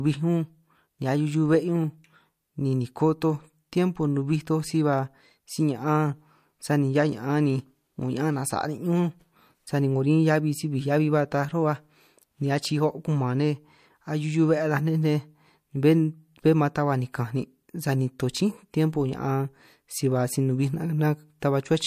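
At 21.40 to 21.42 s there is pre-echo: a hiss about 13 dB above the quiet floor leads a sharp speech attack by 21 ms. The codec's 36 ms window never switched to short blocks and smeared quantisation noise backwards. Unlike ringing, this noise precedes the transient and dulls it.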